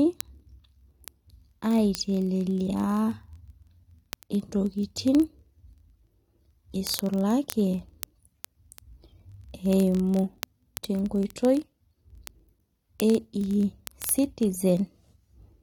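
A receiving device running on its own clock, out of step with the sender by roughly 1000 ppm, causes word clock ticks from 0.11 s to 15.62 s. Each slip drops or repeats a sample, so sharp ticks land about every 20 ms throughout the speech.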